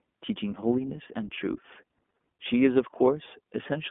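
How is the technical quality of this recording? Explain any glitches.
The quality is limited by iLBC codec coding throughout. The speech is confined to a telephone band of about 200 Hz to 3.5 kHz and sounds plainly rough and synthetic, because each 20 ms frame's excitation is coded on its own, which fits iLBC's 15.2 kbps mode. Simple band-limiting would only sound muffled; here the frame-by-frame coding adds a grainy, buzzy texture.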